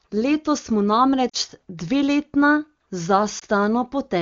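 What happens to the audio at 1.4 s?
Lost AMR speech frames at 1.29 to 1.36 s: corrupted frames made the decoder repeat earlier speech settings with fading gain, so the sound drops toward near silence within the two lost frames before speech recovers, briefly weak or rough.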